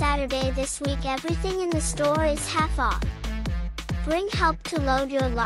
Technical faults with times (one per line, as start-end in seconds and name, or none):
none